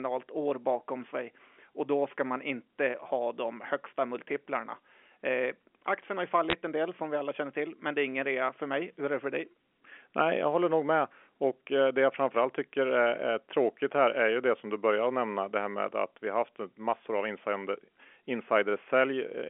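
Bit errors on a digital phone line appear at 6.50 to 6.53 s, between "aktien har ju" and "en del som vi". Roughly a few bits per thousand flipped on what sounds like a 64 kbps A-law line, corrupting single samples into a brief burst of sharp ticks and crackle laid over the speech.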